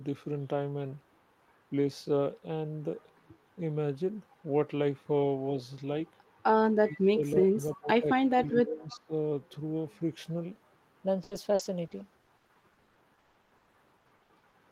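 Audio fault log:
0.00–10.51 s, section at the wrong speed: the opening stretch runs at about 0.84 times its recorded rate, likely from playback or editing against the wrong clock, so speech is dragged out and its pitch sits roughly three semitones low, deep and slow.
6.82–8.07 s and 8.28–9.12 s, speech suppressed in double talk: the echo canceller likely lost track while both ends spoke at once and turned the near talker down, so speech dips by up to about 25 dB, then about 20 dB.
8.90 s, echo leak: a short remnant of loudspeaker sound likely slipped past the echo canceller, returning as a faint delayed copy about 331 ms behind the original and about 25 dB below the speech, a brief ghostly scrap.
11.23–14.55 s, repeated packet loss (robotic sound): packets went missing again and again, with 26 gaps up to 160 ms each, and the receiver patched them by extending prior sound, so about 39% of this span is concealed, giving choppy, robotic speech.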